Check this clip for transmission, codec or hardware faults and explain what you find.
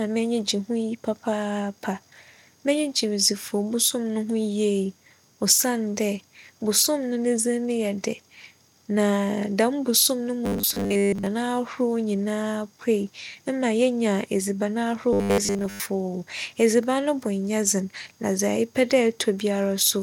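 There's one fault here, showing up twice: robotic sound from repeated short buffers, from 10.45 to 11.26 s right after "dɛm bosom no", and again from 15.13 to 15.86 s after "edziban ahorow". In both spots the speech collapses into a stiff, metallic buzz at 100 Hz that still loosely tracks the talking. The likely cause is audio arriving too seldom, so the player loops the last 10 ms chunk to fill the gap, and most of the real audio in those stretches gets skipped.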